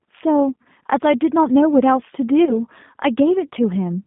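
Throughout, the G.729 codec confines the speech to roughly 150 Hz to 3.6 kHz and gives it a rough, synthetic, pulse-built texture that plain band-limiting would not produce. At 0.63 s and from 2.45 to 2.56 s, VoIP packet loss concealed by the speech codec replaces about 20 ms of sound with fading sound stretched from the last pitch. There is no silent gap or click as in a dropout, and after 2.45 s the speech stays weak briefly while the decoder recovers.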